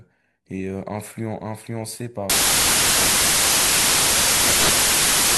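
From 2.30 s to the end, the speech gives way to loud broadband noise. This is a case of samples built from the wrong bytes. The reader assembles each sample incorrectly, perhaps off by one byte or with the byte order swapped. The rapidly changing low bits end up as the most significant part of each value. The result is a harsh, full-band hiss.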